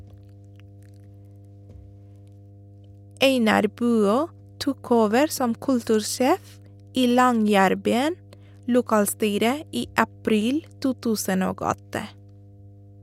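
From the first second to the last, there's mains hum sitting under the speech: a steady low drone at 50 Hz with a few low harmonics stacked above it. It sits roughly 25 dB below the talker. What's going on is the power line leaking into the signal path, most plausibly through a ground loop or a transformer sitting close to the cabling or the interface.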